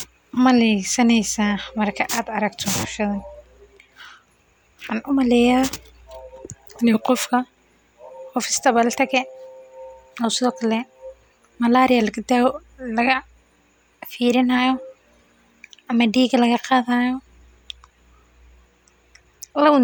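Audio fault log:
No audible faults found in this speech recording.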